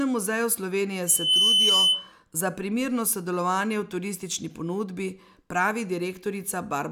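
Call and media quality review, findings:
Loudspeaker feedback squeal, 1.07–2.13 s in speech, ends right before "za primerno sodelovanje v". Single 3 kHz tone swells over a few tenths of a second, sits about 10 dB above the speech. Mic hearing its own speaker, loop gain over one at 3 kHz. Check mic/speaker placement, AEC.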